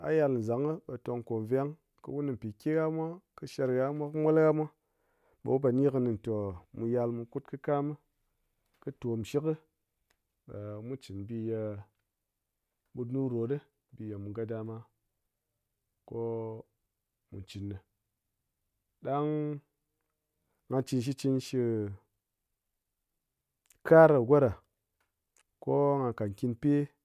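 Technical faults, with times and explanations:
Nothing stood out on listening to this recording of speech.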